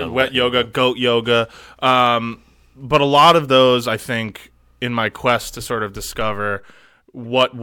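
Near the end of the speech, from 7.24 to 7.26 s, a corrupt frame was decoded: flipped bits in a few compressed frames were decoded anyway, so misread gains and codes put energy at the wrong frequencies. The result is a brief chirp, squeak, blip or burst of noise, peaking around -30 dBFS.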